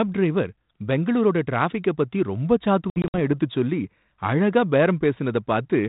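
From 2.9 to 3.34 s, after "பெங்களூரோட டிராஃபிக பத்தி ரொம்ப", packet loss on an ADPCM call cuts hard silent gaps, 140 ms across 240 ms, longest 60 ms. The desynchronised decoder's predictor resumes slightly distorted.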